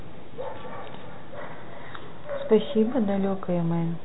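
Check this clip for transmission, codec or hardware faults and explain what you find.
Nothing is amiss in this speech recording: the audio carries the narrow, telephone-band character of G.711 A-law coding, with everything above about 4 kHz absent as that format dictates and at most a faint grain riding on the signal, which fits an ordinary 64 kbps line doing its job.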